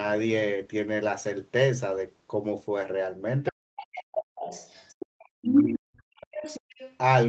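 Other side's voice leaking through appears in this speech recording at 3.46–3.52, 3.76–4.03, 4.36–5.26, 5.49–5.62 and 6.21–6.97 s. A second voice sits roughly 15 dB under the talker, and briefly rises about 5 dB above the talker at 5.49–5.62 s. The likely cause is a loudspeaker feeding the microphone while the echo canceller leaves residue behind. Speech suppressed in double talk follows at 3.51–4.32 and 5.22–6.49 s, overlapping those leaks. The talker's level falls in pieces by as much as around 40 dB while both sides speak, likely because the canceller, unable to separate the two, pulls everything down together.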